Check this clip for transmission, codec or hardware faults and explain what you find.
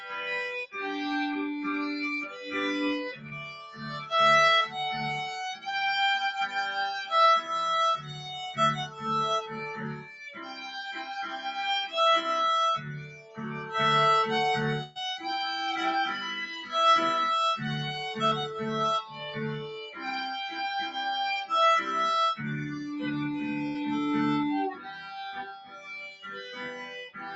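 Yes, there are faults: a speech-tuned noise suppressor is working on the whole clip and cutting specific stretches, and there are four packet losses, two short concealed losses and two bursts. The audio is band-limited at 8 kHz, consistent with a call path using Opus at 48 kbps.

Noise suppressor applied to music or sounds, throughout: a suppressor built for speech treats steady tones, ambience and decay as noise. Attacks pass while sustained parts sink, so the level swings by around 5 dB. A waveform shows breathing envelopes, and a spectrogram shows tails fading early.

Sound cut by the noise suppressor, at 2.25–2.55 s (about 6 dB), 3.12–4.11 s (about 10 dB), 7.97–8.29 s (about 7 dB), 8.86–11.39 s (about 10 dB), 12.78–13.72 s (about 11 dB), 19.03–19.21 s (about 6 dB), 19.88–20.04 s (about 9 dB) and 24.74 s to the end (about 16 dB). In each case the suppressor judged the sound to be noise and pulled it down. 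The waveform narrows there, and the spectrogram dims.

Short concealed packet loss, at 3.27–3.34 s and 18.27–18.34 s: in each case 40 ms never arrived. The decoder extrapolated the preceding sound and then crossfaded back, which gives a brief smear or wobble. A spectrogram shows a short stretch of smoothed, repeated texture.

Burst of packet loss, at 14.83–14.98 s and 23.67–23.78 s: 120 ms and 80 ms of audio are missing, filled with 119 ms and 73 ms of concealment. The last sound is continued and fades, as a held buzz or a dying hiss, before playback resumes further on. Spectrograms show smeared, decaying bands.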